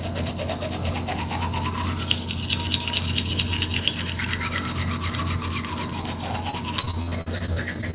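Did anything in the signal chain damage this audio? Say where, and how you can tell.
Yes. The damage is at the network stage. From 6.50 s to the end of the clip at 7.94 s, the everyday sounds turn choppy and robotic, with 14 short holes. The longest is about 51 ms, and together they remove roughly 0.3 s of audio, about a fifth of that stretch. This is repeated packet loss. Each lost or late packet was patched by extending the previous sound, which produces the robotic texture. The rest of the call path, band-limited at 4 kHz in a way that fits G.711 mu-law, contributes no fault here.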